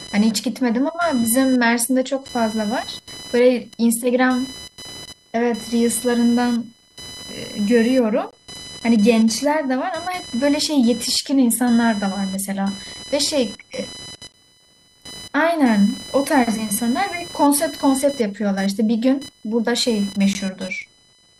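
Computer activity noise runs under the speech from start to finish: a buzzing chirp pulsing at roughly 1 kHz, around 20 dB below the speech. Processor or peripheral load is disturbing the audio ground. On a spectrogram it shows as a thin line near 1 kHz, independent of the speech.

A gap between stream segments cuts the sound from 8.31 to 8.33 s, again at 14.32 s and at 20.33 s. The holes are spaced about 6 s apart, where segment timestamps fail to meet and silence is inserted. Each is a hard-edged dropout of about 16 to 21 ms, seen as a flat waveform notch or blank spectrogram column.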